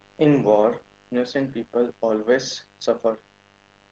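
Mains buzz runs the whole way through, a raspy 50 Hz hum with spiky harmonics from switching interference, sitting fairly low, roughly 35 dB under the speech. Opus voice compression is also there from start to finish: the top end stops around 8 kHz, and the coarse SILK coding leaves the speech hoarse and slightly robotic, which fits a low bitrate near 12 kbps.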